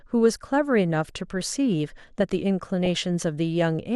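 Throughout the speech the sound is dull and muffled, with a gurgling, grainy roughness that never lets up and upper frequencies that seem to come and go. This is MP2 compression damage, likely from encoding at a low rate that fits about 80 kbps. Layer II divides the spectrum into 32 sub-bands and shares out bits among them. With too few bits the top bands switch off and flicker back, while the remaining ones are quantised coarsely.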